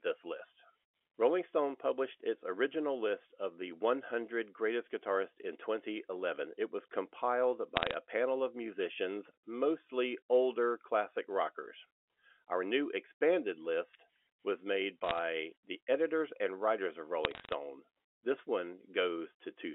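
Telephone-band speech carrying bit errors on a digital phone line: bursts of sharp ticks from 7.76 to 7.94 s after "was compiled", from 15.04 to 15.18 s after "expanded list was made", and from 17.25 to 17.52 s after "editors and writers of". Each flipped bit corrupts one sample. On the waveform these show as isolated single-sample spikes, and on the spectrogram as thin vertical broadband lines. The error rate is a few tenths of a percent.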